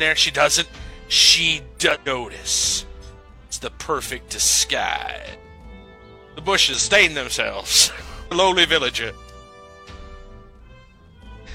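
Five short bursts of damaged data in a compressed stream break up the audio, each about 60 ms long: 1.91–1.97 s, 5.30–5.36 s, 6.74–6.80 s, 8.27–8.33 s and 11.43–11.49 s. Corrupted or missing bytes in the encoded stream leave the decoder unable to read the affected frames, so it loses sync and skips forward to the next valid frame header. Each event is heard as a brief blip in the sound.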